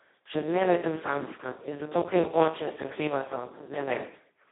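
Throughout, heavy Speex codec damage makes the speech hoarse, buzzy and robotic, consistent with roughly 2 kbps. A spectrogram shows energy held within 200 Hz to 3.7 kHz, blank above 3.9 kHz.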